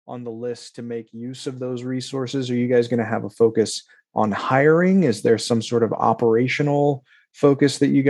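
From 0.05 s to 4.3 s, automatic gain rising: the gain control judged the incoming speech too quiet and kept raising its amplification, climbing by about 16 dB over those four seconds rather than settling at a fixed level. Because the whole input is scaled together, the speech and the room noise beneath it swell in step, so the recording seems to creep closer and louder through its first half.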